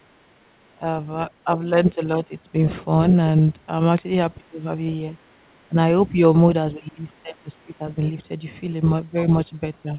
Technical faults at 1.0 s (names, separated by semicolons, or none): none